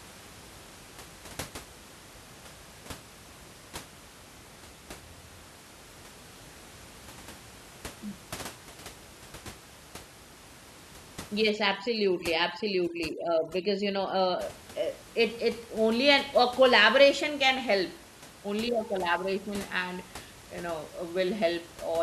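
Overdone noise removal from 11.50 to 14.42 s in this speech recording: an overly aggressive noise reducer switches off frequency bands near its noise estimate, leaving twinkling near-silence where the room noise, about 20 dB below the speech, had been.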